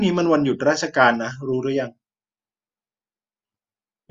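No audible technical fault anywhere in the recording.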